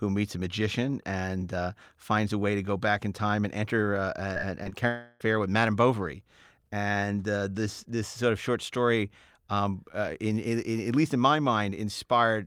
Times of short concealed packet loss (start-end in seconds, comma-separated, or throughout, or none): 4.33-4.37, 4.63-4.73